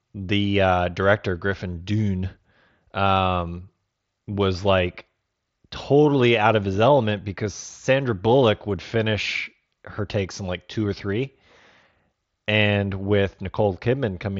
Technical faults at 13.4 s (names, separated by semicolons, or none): none